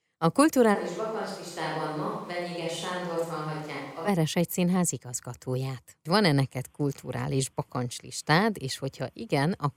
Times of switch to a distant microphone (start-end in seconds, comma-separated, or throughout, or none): 0.76-4.07